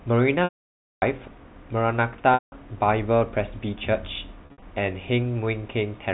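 Packet loss with pitch repetition strikes three times. From 0.44 to 1.02 s about 580 ms of audio is lost, and the receiver repeats the last pitch period briefly before it fades to silence. From 2.34 to 2.52 s, 180 ms drops out the same way. From 4.46 to 4.62 s, shorter gaps of up to 60 ms are scattered, giving a held, buzzy flutter. The speech returns with soft cross-fades, over narrowband G.711 telephone coding.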